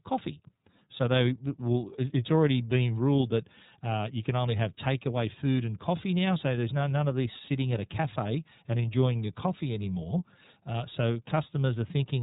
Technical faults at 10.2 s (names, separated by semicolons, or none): iLBC codec